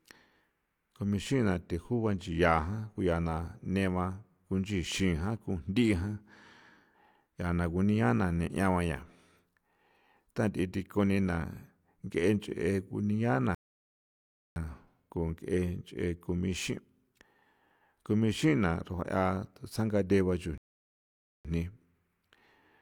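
At 13.55 s the speech drops abruptly into silence, holds for about one second, and picks up at 14.56 s from the exact point where it broke off. The same happens again from 20.58 s to 21.45 s, a gap of 0.87 s. Both are rebuffering stalls: playback used up its downloaded audio and waited for more to arrive. No material is skipped, but each pause stretches the clip's running time.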